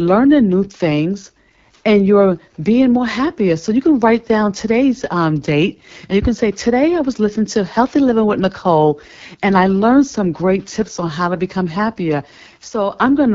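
Throughout the speech, the AMR wideband (HD Voice) codec leaves a rough, raspy texture, which fits its low 8.85 kbit/s mode. The vocal tract model runs short of bits for the excitation pulses, and the band above 6.4 kHz is only shaped noise.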